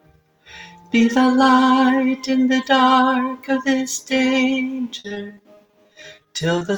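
From 4.99 to 6.63 s the audio turns choppy and robotic, with a rapid string of short holes up to 50 ms long. This is repeated packet loss: each missing piece is patched by stretching the previous sound, which covers about a fifth of that stretch.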